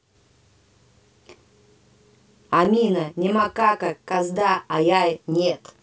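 From 2.65 s to 5.80 s the speech has a channel delay (doubling). One channel arrives 32 ms late, which fits a 512-sample buffer, and when the two are summed to mono the late copy sits on top of the original at equal strength. Each syllable gains a distinct, equally loud twin. At 32 ms the gap is too long to blur into the hollow tonal colouring of comb filtering, and there is only one repeat, with no decaying tail as reverberation would have.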